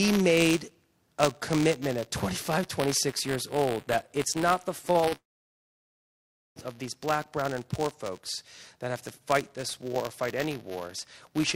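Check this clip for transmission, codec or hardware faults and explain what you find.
Three faults are present: a continuous buffer tearing buzz, a cluster of short stalls from late packets, and a call audio freeze right after them.

Buffer tearing runs through the whole clip as a rattling buzz at 188 Hz, which fits a 256-sample buffer whose write and read positions have slipped. A small slice of each buffer carries audio from about 15 ms earlier, hard-joined on both sides. Unlike mains hum, the buzz is present only while there is signal.

Short stalls from late packets occur at 4.91–4.97 s, 5.01–5.05 s and 5.09–5.14 s. Each time the jitter buffer ran empty, and the last sound was stretched by 34, 18 and 31 ms before playback continued from the same point. The result is a briefly held sound with a slight buzz or dip. Nothing is skipped, which separates these from packet-loss dropouts.

The call audio freeze runs from 5.16 to 6.58 s, likely caused by packets held up in transit. 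The last sound is carried on for about 1.4 s, and nearly all of that, about 1.36 s, is silence. The audio then resumes exactly where it stopped, so a gap is inserted rather than content lost.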